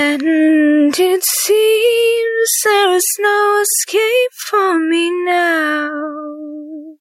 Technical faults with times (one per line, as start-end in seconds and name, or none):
0.00-7.01 gain pumping